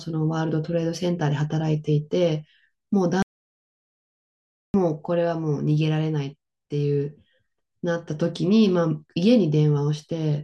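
At 3.22 s the speech cuts off abruptly into an audio dropout to silence lasting about 1.5 s, resuming mid-flow at 4.74 s. The gap holds silence with no room tone, a flat line on the waveform and an empty band on the spectrogram. The likely cause is a lost input while recording continued.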